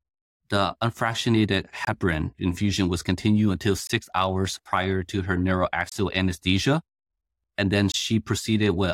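Gaps between chunks occur at 1.85 to 1.87 s, 3.87 to 3.90 s, 5.90 to 5.92 s and 7.92 to 7.94 s. The speech arrives in 2.0 s blocks, with about 23 ms of silence left at every join. Nothing is lost, but the speech is cut by small holes at a steady two-second rhythm.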